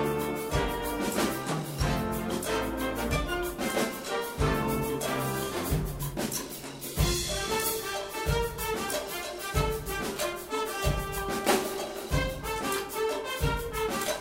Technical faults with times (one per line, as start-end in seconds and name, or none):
9.49-14.21 crude rate conversion